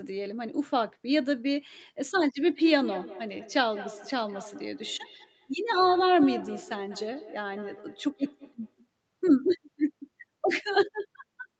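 Speech with feedback echo between two devices from 2.46 to 8.9 s. Each phrase returns about every fifth of a second, thinner and ringing, peaking about 11 dB below. The fixed, repeating interval sets it apart from room reverberation.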